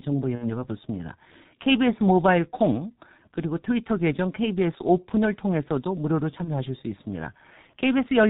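From the start, the speech runs through the G.723.1 codec at a very low bitrate, which fits its 6.3 kbit/s mode. The codec keeps nothing above 4 kHz and models the voice in coarse 30 ms frames, so the damage is heavy. The voice sounds muffled and hoarse throughout, and consonants smear into each other instead of landing crisply.

At 0.35 s, VoIP packet loss concealed by the speech codec begins. The gap fits about two lost 30 ms frames, roughly 60 ms of missing audio. The decoder fills it by carrying its last pitch and filter forward at falling gain, so the sound stretches and fades. Because each rebuilt frame feeds the next, the voice stays weak and distorted until about 0.67 s. The same concealment recurs from 6.44 to 6.56 s, consistent with a single lost frame, as a shorter smear that recovers within about a tenth of a second.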